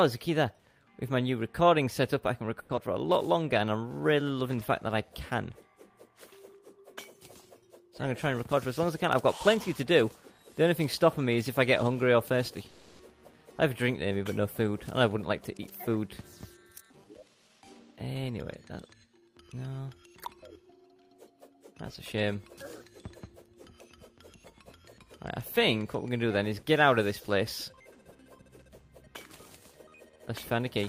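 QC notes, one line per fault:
2.59 to 2.71 s, call audio freeze: the sound stalls for about 100 ms and what fills the hole is the last sound carried on as a fading buzz, never true silence. Afterwards it picks up exactly where it left off, so nothing is lost, just a gap pushed in. That's the pattern you get when packets were likely held up and the jitter buffer ran dry, and it adds roughly 100 ms of delay.
2.75 to 2.79 s, short concealed packet loss: a quick smear right after the freeze, where about 60 ms of real audio never made it to the decoder and the receiver patched 20 ms by extending the previous sound, then blended back in. You hear a brief wobble rather than a hard dropout. The net effect trims the built-up delay by around 40 ms.
2.88 to 3.34 s, jitter buffer slow-down: the receiver is rebuilding its reserve by repeating single pitch periods and bits of pauses over and over, adding 38 ms over the stretch. 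Playback runs at 94% speed with pitch unchanged, so sounds come out a little drawn out and there can be a slight warble.
12.68 to 13.01 s, call audio freeze: a longer stall, 310 ms, with the last sound held and fading rather than going silent, then resuming from the same spot with nothing missing. Same likely cause, delayed packets emptying the jitter buffer, and this one pushes about 310 ms more latency into the call.
8.04 to 9.04 s, 15.61 to 16.03 s and 16.57 to 19.42 s, jitter buffer speed-up: the buffer is holding more than it wants, so it's cutting out short slices of one or a few pitch periods in a row. Speed goes to 105%, 107% and 109%, removing around 70 ms, 40 ms and 300 ms. Pitch stays put, but the audio feels hurried.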